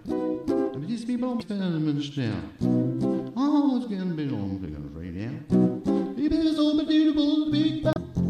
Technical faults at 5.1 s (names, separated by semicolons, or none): none